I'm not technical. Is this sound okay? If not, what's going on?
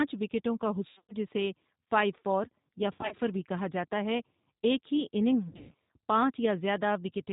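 No, there are two problems. The whole clip has gone through the G.729 codec, a phone-call compressor built for very low data rates. It doesn't store the speech itself. It stores a rough recipe for the voice and rebuilds it at the other end, throwing away everything above 4 kHz. Here that damage is easy to hear: the speech stays understandable but sounds muffled, slightly gritty and a bit artificial throughout.

On top of that there are three dropouts from VoIP packet loss concealed by the speech codec. Chunks of the call went missing, and the decoder papered over the gaps by stretching out what it last heard and letting it fade. The first is right after "وکٹوں کا", from 0.89 to 1.14 s. The second runs from 2.95 to 3.15 s, between "فار یا" and "بھی کہا جاتا ہے". The third follows "ہے ایک ہی اننگز", from 5.49 to 5.74 s. In each gap the voice turns into a smeared, buzzy or hissy fade, then takes a moment to sound right again.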